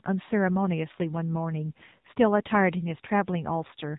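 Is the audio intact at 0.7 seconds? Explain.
No. At 0.7 s, as throughout the clip, the speech carries AMR narrowband mobile codec damage. Everything above 4 kHz is gone, leaving a flat ceiling on a spectrogram, and the synthetic, buzzy voicing fits a low bitrate of about 7.4 kbps from a pulse-driven vocal-tract model.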